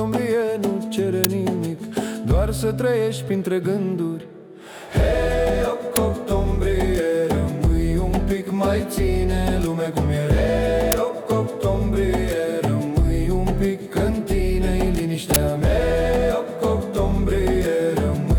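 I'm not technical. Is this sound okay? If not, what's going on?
No. There are four harsh bursts of noise, at 1.24, 5.96 and 10.92 seconds and from 15.34 to 15.36 seconds. This is an uninitialised buffer: the player sent out a chunk of sound before filling it, so random leftover data was played instead. Each burst lasts only 10 to 20 thousandths of a second. Unlike a dropout, which goes silent, or a simple click, it's a loud blast of digital noise.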